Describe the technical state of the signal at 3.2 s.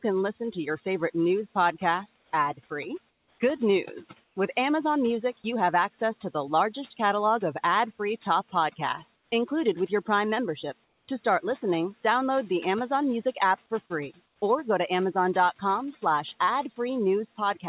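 At 3.2 s the pause holds comfort noise in place of the background. From 3.08 to 3.4 s, about 320 ms, the real room sound is gone. A steady, featureless hiss replaces it, about 4 dB quieter than the background around it. The sender likely stopped transmitting when its voice detector heard no speech. The receiver then generated shaped noise to fill the gap.

Overdone noise removal is also present here, as it is across the whole clip. The suppressor cuts individual frequency bands hard whenever they sit close to its noise estimate. Faint parts of the speech are taken out with them. The background drops and breaks up into small twinkling specks. Above 4 kHz there is no content at all, consistent with a narrowband call codec.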